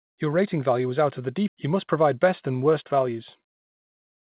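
A speech clip with two timing faults. At 1.48 to 1.50 s there is a skip ahead: roughly 0.7 s of audio was dropped, likely because the jitter buffer overflowed while later audio was already waiting, and playback jumps straight to it with no fill. The sound lurches forward mid-flow. On a waveform the two sides meet almost edge to edge, and a spectrogram shows formant tracks and harmonics breaking off and restarting at different positions across that seam. From 3.08 s to 4.25 s a jitter buffer speed-up runs the audio at about 116% speed while the pitch stays put. The buffer held more audio than its target, so the receiver repeatedly cut pitch-period-sized pieces, removing about a fifth of a second in total, and the speech sounds hurried. A waveform shows syllables packed closer together. On a spectrogram the harmonic spacing stays unchanged while syllable and word events sit nearer each other in time. 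The G.711 mu-law call path leaves nothing above 4 kHz, so the spectrogram is empty above that line throughout.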